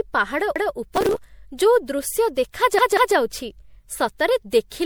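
Across the whole recording the speech sounds swirly, smeared and hollow, with consonant attacks blurred and a watery, bubbling texture in the upper range. The likely cause is generation loss: the audio was decoded and re-encoded several times with a lossy codec, the pattern suggesting roughly four MP3 passes around 96 kbit/s. Each pass quantised the signal again on a shifted frame grid. On a spectrogram the high bands show ragged holes and blocky, smeared patches.

From 0.56 to 0.74 s a repeated buffer occurs. Fresh audio failed to arrive in time, so the playback device replayed its last block, about 186 ms long, which fits an 8192-sample buffer. That block is heard twice in a row as a short stutter, with a hard join between the copies. The waveform shows two identical stretches butted together, and the spectrogram shows a vertical line at the seam.

Between 0.95 and 1.27 s, just before "ଯୋଉ ଦୃଶ୍ୟ", there is a burst of processor overload crackle. 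The processor fell behind on very small buffers of a millisecond or two and missed about thirty deadlines in quick succession. Each missed block was skipped, leaving a tiny hard-edged gap. Together they produce a gritty, tearing crackle over the speech. In the waveform this appears as many small dropouts, and the spectrogram shows a dense comb of thin vertical broadband streaks.

From 2.79 to 3.16 s, right after "ଯୋଉ ଦୃଶ୍ୟ", a second repeated buffer occurs. The same roughly 186 ms block plays three times in total, two extra plays, so the stutter is longer, with a hard edge at each repeat. The waveform shows three identical segments in a row, and vertical discontinuity lines mark each boundary on the spectrogram.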